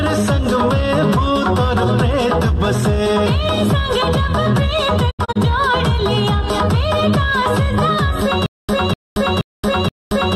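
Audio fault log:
5.09 to 5.37 s, digital broadcast dropout: the receiver lost frames and muted, fading out over about 20 ms, leaving several short holes totalling 120 ms across roughly a quarter second, the longest 72 ms, which fits about five lost frames; that sound is gone.
8.46 s to the end, stutter with silent gaps: a 248 ms fragment repeats four times, each followed by about 226 ms of digital silence, a 475 ms cycle, likely a stalled stream replaying its last buffer on each retry while new audio is lost.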